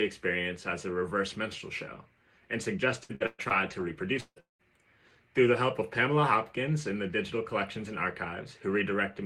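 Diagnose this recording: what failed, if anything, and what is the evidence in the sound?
Repeated packet loss (robotic sound) from 2.91 to 4.61 s, a network-stage failure. Across that stretch the audio drops out six times, with the longest hole about 190 ms and roughly 600 ms missing in all. The receiver's concealment stretches the last good fragment into each gap, so about 35% of the span is synthetic fill. That makes the passage choppy, with pieces missing. Some of what was lost, about a fifth of a second, is partly rebuilt.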